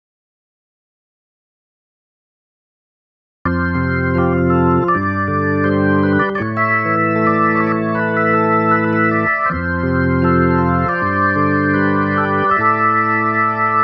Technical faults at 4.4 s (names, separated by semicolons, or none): none